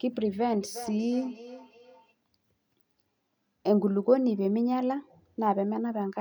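From 0.61 to 2.15 s the speech comes back at a steady interval of roughly four-tenths of a second, peaking at about 14 dB below the speech. This is feedback echo between two devices: one device plays the other's audio, and that microphone picks it up again, outside its own echo canceller's reach. Unlike room reverberation, which smears continuously, this returns as distinct, evenly spaced copies that sound thinner and more ringing.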